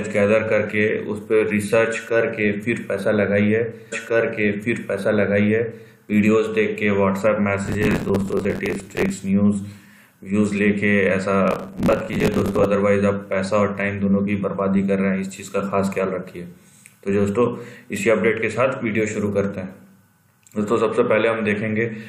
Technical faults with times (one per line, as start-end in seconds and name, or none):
3.91-5.91 stream segment repeated
7.66-9.10 processor overload crackle
11.48-12.65 processor overload crackle